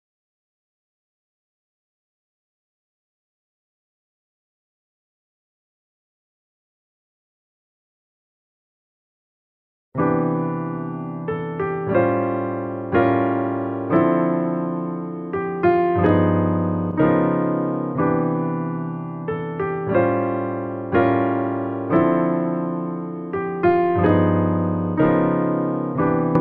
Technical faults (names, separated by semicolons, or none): hard clipping